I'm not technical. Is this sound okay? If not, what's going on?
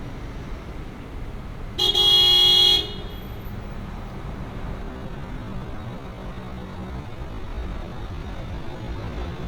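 No. From 4.8 s to the end there's a time-stretched section: the sound abruptly slows to about 0.54 times its pace while its pitch stays the same, so it drags. Likely, software stretched that part to fill a length by repeating short pieces.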